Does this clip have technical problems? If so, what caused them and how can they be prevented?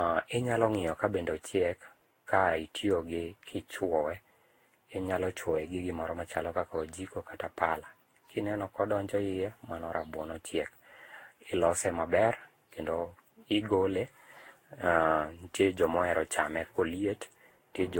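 Yes: generation loss throughout, swirly and hollow speech with blurred attacks, likely from roughly ten lossy re-encodes near 60 kbit/s. The spectrogram shows patchy holes and nothing above 16.7 kHz. Prevent it by keeping a lossless master and encoding only once.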